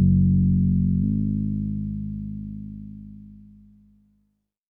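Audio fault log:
1.03–4.70 s: section at the wrong speed. From 1.03 s to the end, the audio runs about 12 percent fast, at 1.12 times its original rate, so the sound rises by roughly two semitones and events pass more quickly than in the first second. Speed and pitch shift together at the boundary instead of one changing alone. That coupling points to the passage being played against the wrong clock, likely a resampling or playback-rate mismatch in an editor or player.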